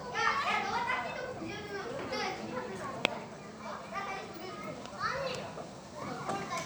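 Listening through this recording of sounds, nothing stood out as a technical problem at any point.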